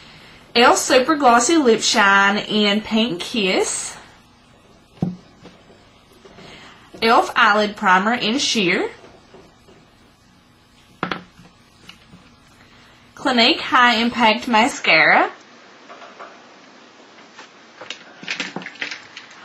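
At 14.71 s the sound abruptly loses everything above 7.6 kHz, shifts level by around 5 dB and gains a faint new noise floor, likely an input switched to a poorer device rather than an EQ change.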